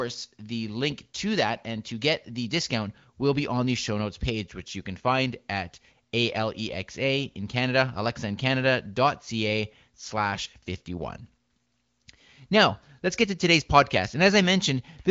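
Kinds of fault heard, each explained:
Nothing here counts as a fault: the speech comes through the AMR wideband (HD Voice) codec at a rate that fits 18.25 kbit/s, with the top of the band stopping around 7.4 kHz as that codec's design would have it.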